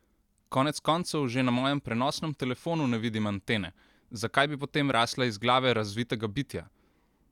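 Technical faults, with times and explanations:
Nothing to flag here; this speech clip runs without any technical faults worth pointing out.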